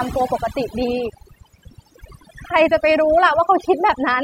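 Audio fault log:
Throughout: overdone noise removal. Noise reduction set far too strong gates individual frequency bands down whenever they sit near its noise estimate, taking quieter speech detail with them. The pauses fall to near silence scattered with twinkling specks. On a spectrogram the background shows as isolated flickering dots in an otherwise empty field, and the speech harmonics look patchy with missing fragments.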